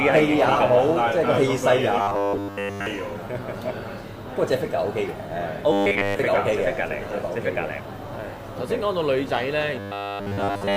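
Robotic sound from repeated short buffers appears from 2.01 to 2.86 s, from 5.72 to 6.19 s, and from 9.80 s to the end of the clip, where the audio turns into a rigid, metallic 100 Hz buzz. That pitch fits a roughly 10 ms fragment being replayed over and over. The likely cause is new audio arriving too seldom, so the software loops that fragment and skips the real signal for essentially the whole of each stretch.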